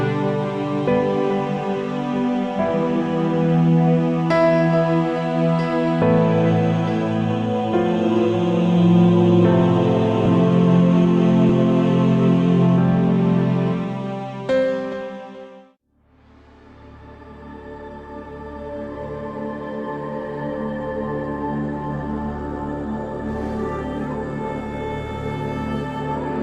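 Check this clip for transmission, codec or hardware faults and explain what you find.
There's one fault, a case of compressed frames skipped at about 11.49 s. A couple of frames never got decoded, so the audio jumps ahead by roughly 40 ms, which fits 20 ms frames.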